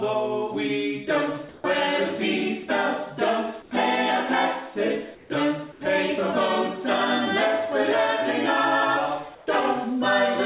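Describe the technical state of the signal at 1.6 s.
From 1.49 to 1.64 s the real background gives way to steady, featureless comfort noise about 4 dB quieter, likely from discontinuous transmission, unlike a dropout, which would be silence. At 1.61 to 1.64 s the returning sound's first 30 ms are missing, an onset clipped by the voice detector, so it begins abruptly out of that noise rather than fading in.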